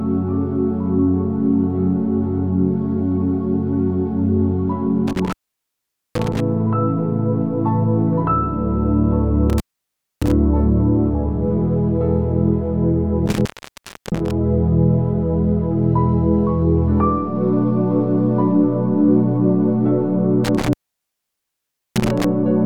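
Intermittent contact breaks the sound four times: 5.08 to 6.40 s, 9.50 to 10.32 s, 13.26 to 14.31 s, and 20.44 to 22.24 s. A loose cable or plug opens briefly. The line stays open for 0.83, 0.62, 0.67 and 1.23 s. Crackle marks each break, and hiss fills the gaps.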